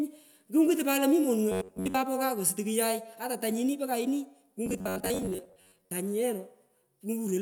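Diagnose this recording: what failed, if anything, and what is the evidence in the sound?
Robotic sound from repeated short buffers at 1.52–1.97 s and 4.66–5.93 s: the speech turns into a rigid, metallic buzz fixed near 94 Hz. The likely cause is a starved driver buffer replaying its last chunk of about 10.7 ms. Most of the first stretch and about half the second is repeated audio.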